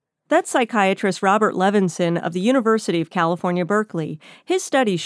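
No faults detected in the speech recording.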